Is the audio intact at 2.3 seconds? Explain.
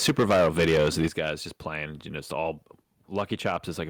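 Yes, the speech at 2.3 seconds plays through intact, with no audible fault at that point.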